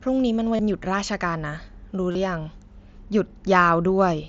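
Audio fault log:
0.56–0.59 s and 2.11–2.15 s, concealed Bluetooth headset packet loss: brief buzzy, held tones of about 30 ms and 38 ms with a slight warble as the sound resumes. Lost headset packets, likely runs of four and five, were filled by repeating recent waveform through the mSBC link.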